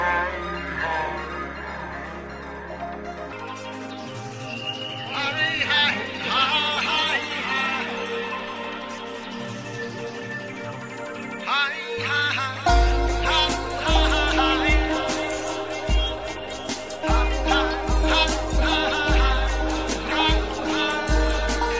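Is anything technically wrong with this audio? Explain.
Yes. A wrong sample rate affects the opening, from 0.0 to 3.33 s. The samples are being played back slower than they were captured, with no rate conversion, so the sound runs at about two-thirds of its proper speed (0.667×) and its pitch drops by about 7 semitones at the same time. The ratio points to 24 kHz material being played at 16 kHz. As a result, this first stretch sounds low, heavy and dragged out.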